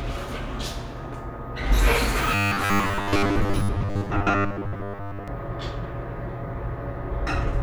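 From 2.35 to 5.28 s the sound turns into robotic sound from repeated short buffers: a rigid, metallic 100 Hz buzz, which fits a 10 ms block being replayed, likely because new audio arrived too seldom and most of the real audio was skipped. The waveform shows identical 10 ms segments repeating, and the spectrogram shows evenly spaced horizontal harmonic lines at 100 Hz intervals.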